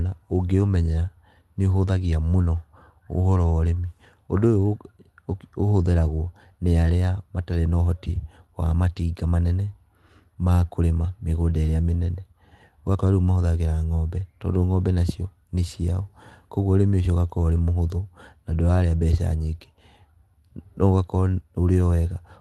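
Speech heard over a call link, marked by clock drift between sender and receiver: the sending side's clock runs roughly 4 percent fast, so the receiver's jitter buffer keeps overfilling for the whole clip. Unlike packet loss, this leaves no gaps or smeared concealment. The sound simply runs slightly hurried, with uneven stumbles.

Those stumbles are repeated timing corrections from 0.04 s to 22.38 s, playing at about 104 percent speed. The receiver trims short slices at irregular intervals, always removing rather than repeating, which is what separates this from a slow-sender case with stutters or brief silences.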